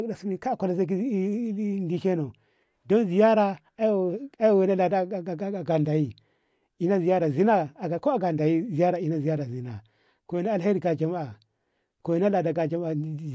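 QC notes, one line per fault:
No faults found in the speech on this pass.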